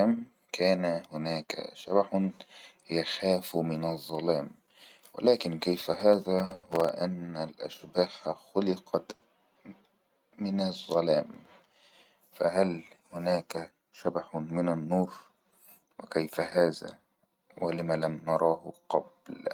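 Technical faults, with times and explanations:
5.81–6.89 s and 11.34–11.73 s, processor overload crackle: the sound turns gritty and torn for about a second, then for under half a second. The processor repeatedly missed its deadline on very short buffers, a few dozen times in the first burst and a dozen or so in the second. Each miss replays a sliver of old audio with hard edges. The spacing points to buffers of a millisecond or two. Unlike a stall, this is a dense rattle of many tiny breaks riding on the sound, and it stops abruptly when the load eases.
6.45–6.52 s, 6.54–6.65 s and 9.15–9.24 s, short stall from a late packet: the sound is held and stretched for about 50 ms, 90 ms and 70 ms. Each time a packet arrived late and the jitter buffer ran dry, so the receiver extended the last sound until the packet arrived. It then resumed exactly where it had stopped, and nothing is lost. The first two stalls fall inside the first crackle burst.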